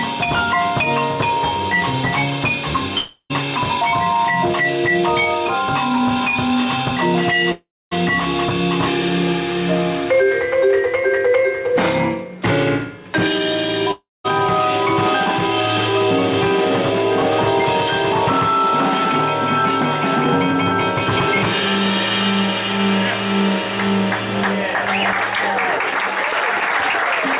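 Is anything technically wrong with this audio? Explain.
Yes. There are three gaps where the sound breaks off, most likely a long network dropout each time: 2.98 to 3.32 s, 7.52 to 7.93 s, and 13.91 to 14.26 s. With no packets arriving, the receiver extends the last sound as a fading buzz, which dies into silence for about 70 ms, 250 ms and 200 ms respectively. The audio then resumes, with roughly a third to two-fifths of a second missing each time. The call path cuts everything above 4 kHz, which suggests a G.711 mu-law codec.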